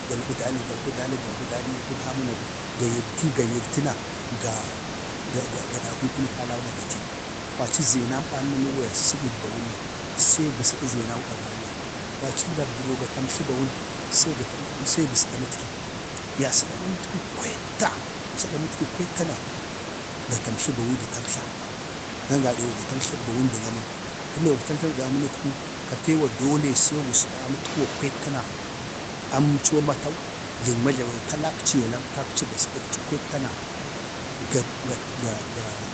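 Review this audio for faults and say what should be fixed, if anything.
Nothing here needs fixing; the room noise sitting about 10 dB under the speech is just part of the space it was recorded in.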